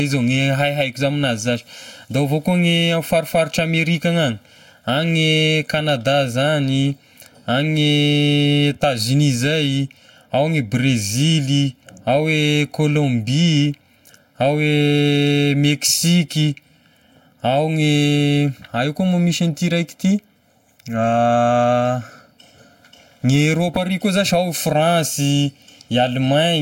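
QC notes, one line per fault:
Throughout: channel delay (comb filtering). One channel runs late by roughly 1.5 ms, and the two are summed to mono. Parts of the speech common to both sides cancel at evenly spaced frequencies. The first notch sits around 400 Hz, and further notches repeat up the spectrum. The voice sounds hollow and phasey. The notches stay fixed for the whole clip, so the tone never recovers.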